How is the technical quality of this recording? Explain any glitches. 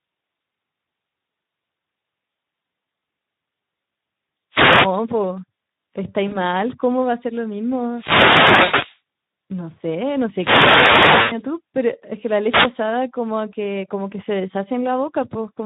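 The quality is poor: low-bitrate speech coding colours the whole clip, and it is interrupted by radio noise bursts and concealed packet losses.

Speex codec, throughout: at about 11 kbps the CELP coder has too few bits for the excitation, so speech sounds plainly noisy and hoarse.

Wireless microphone noise hits, at 4.51–4.91 s, 7.88–9.01 s, 10.28–11.46 s and 12.41–12.74 s: the FM radio link fades, receiver noise rises, and a swish of static is heard.

VoIP packet loss concealed by the speech codec, at 6.27–6.37 s, 8.63–8.84 s and 11.21–11.35 s: the decoder fills about 40 ms, 120 ms and 100 ms of missing audio. It extrapolates its last pitch and filter with falling gain, producing a fading buzzy tone or coloured noise, and the speech stays weak afterwards. The last two losses fall inside noise hits.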